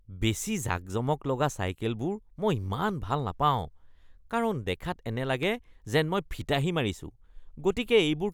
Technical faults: processor overload crackle

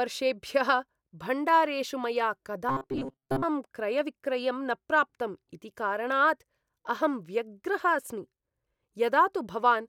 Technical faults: robotic sound from repeated short buffers

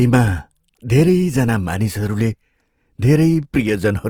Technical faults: Opus compression

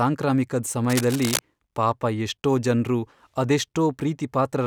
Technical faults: cable scratch noise

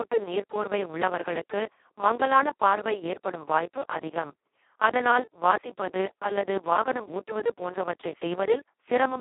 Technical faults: Speex codec

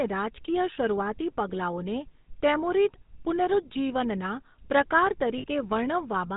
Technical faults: GSM full-rate codec; lost GSM frames

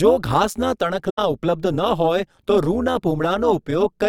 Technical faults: overlap-add ripple; AAC frame loss with muting

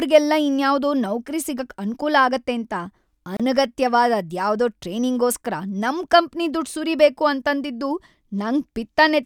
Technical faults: gap at a join of encoded pieces

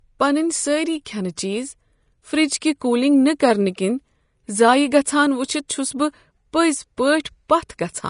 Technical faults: Vorbis compression

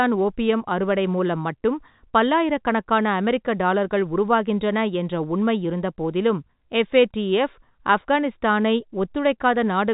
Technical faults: none

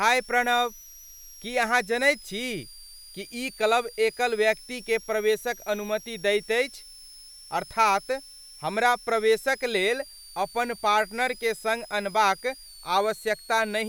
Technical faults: switching supply whistle

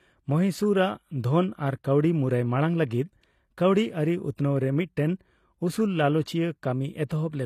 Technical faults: HE-AAC compression; pre-echo

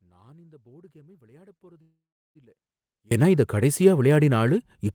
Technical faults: audio dropout to a faint residue; short stall from a late packet; call audio freeze

